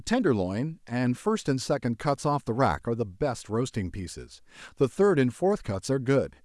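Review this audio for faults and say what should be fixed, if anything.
No faults found; nothing to fix.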